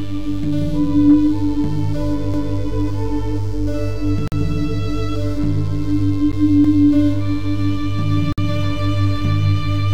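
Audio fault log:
2.34 to 2.59 s and 6.64 to 6.89 s, overlapping chunks: The music stutters at each of these points. A quarter-second stretch, 250 ms, plays and then plays again. Each new chunk of audio begins before the previous one has finished, so the shared piece is heard twice. The two repeats fall about four seconds apart in the stream, which fits chunks of about 4 s.
4.28 to 4.32 s, 6.32 s, and 8.33 to 8.38 s, gap between stream segments: The music drops out abruptly three times and then resumes. The holes last about 44 ms, 12 ms and 52 ms. Their edges are hard because the timing of adjacent segments leaves a space, and the player fills that space with pure silence. No music is lost. The silence only pushes everything later. The regular spacing points to segments of about 2 s.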